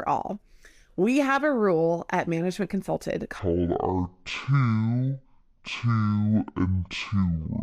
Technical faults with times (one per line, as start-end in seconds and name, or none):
3.39-7.62 section at the wrong speed